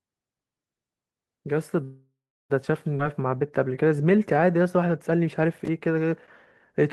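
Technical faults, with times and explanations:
1.83–2.52 s, call audio freeze: packets were likely delayed and the jitter buffer ran empty, so the last sound decays as a buzz or hiss into 350 ms of silence, then resumes intact.
2.98–3.01 s, skip ahead: a stretch of delayed audio, around a fifth of a second, was discarded, so playback jumps forward with the two sides almost directly joined.
3.03–4.88 s, jitter buffer slow-down: the buffer rebuilt its reserve by repeating pitch periods, adding 190 ms, so speech runs at 90% speed with unchanged pitch and stretched sounds.
5.53–5.68 s, processor overload crackle: the processor missed a handful of deadlines on short buffers of about 5 ms, each leaving a hard-edged silent gap heard as a brief crackle.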